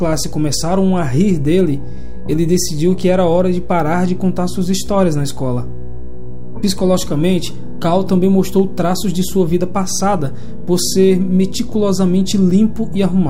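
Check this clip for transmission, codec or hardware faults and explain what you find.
A DC offset runs through the whole clip, from start to finish. It has no sound of its own: nothing in the audible range changes. What it shows instead is a steady component at 0 Hz, the very bottom of the spectrum, at about -19 dBFS. The cause is a constant shift of the entire waveform away from the zero line, so the signal swings around a displaced centre. That wastes headroom on one side and brings clipping closer on loud passages.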